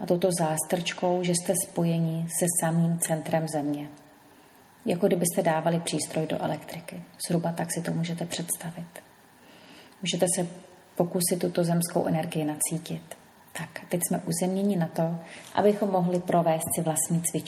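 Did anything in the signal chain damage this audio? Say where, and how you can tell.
No, nothing in the signal chain has damaged this audio. There is no stage in the chain whose effect can be heard in the sound.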